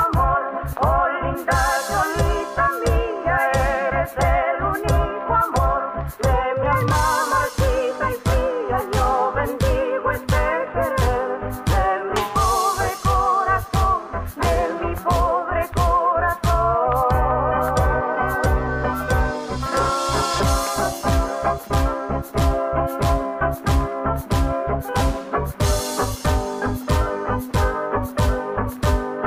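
Nothing stood out on listening to this recording that would count as a technical fault.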